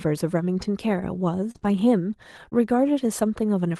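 At 1.51 s the speech is hit by short concealed packet loss lasting until 1.66 s. About 40 ms of audio failed to arrive in time, and the receiver filled 32 ms of it by extending the preceding sound, either continuing its pitch or substituting shaped noise, before blending back into real audio. The local timeline also stretches by roughly 10 ms. It comes across as a brief smear and wobble in the speech.

Inside that stretch, from 1.55 to 1.57 s, a lost packet was rebuilt from error correction. The following packet carried a low-bitrate copy of the missing 20 ms, so there is no hole, but that slice sounds coarser and noisier than the audio around it.

A second concealed loss runs from 1.59 to 1.63 s, with 19 ms of a 20 ms gap filled by extrapolation. That adds another small smear right after the previous one.

Immediately afterwards, from 1.63 to 1.65 s, another 20 ms packet is played from its error-correction copy, giving a short rough, grainy patch.

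At 2.50 to 2.53 s the same pairing recurs. A concealed loss fills 17 ms of a 20 ms gap, heard as a small smear. Overlapping it from 2.51 to 2.53 s, a lost packet rebuilt from error correction supplies 20 ms of degraded, noisier audio.

The Opus call path carries the audio with its usual coding noise and a high-frequency cutoff at 12 kHz.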